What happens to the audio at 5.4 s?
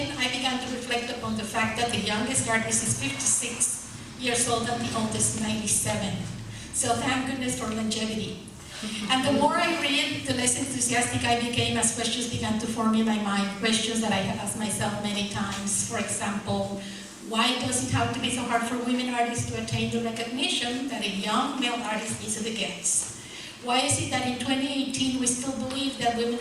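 A single loud pop hits from 5.38 to 5.40 s, a few dB above the audio, likely a voltage pulse from a plug, switch or static; the sound carries on underneath.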